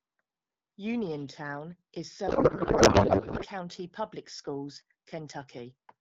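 From 2.27 s to 3.45 s the speech gives way to garbled noise and warble that barely tracks it, then clears abruptly. This is a codec payload misread: the AMR-WB frames were packed octet-aligned but decoded as bandwidth-efficient, so every field was read from the wrong bit positions and the decoder built sound from misplaced parameters. Around it, the wideband speech is clear, which fits a 12.65 kbit/s mode with light coding damage.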